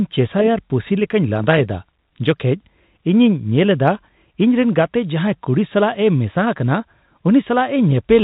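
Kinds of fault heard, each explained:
No faults can be heard in this speech clip. It carries the narrow band of G.711 telephone coding, with nothing above 4 kHz, and the faint quantisation noise riding about 38 dB under the signal is what the A-law format normally leaves.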